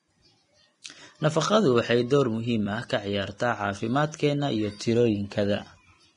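Throughout, the speech sounds hissy and grainy with smeared consonant attacks and nothing above 10.6 kHz, likely heavy Vorbis compression near 29 kbps. Unlike a plain low-pass, the treble turns to noise.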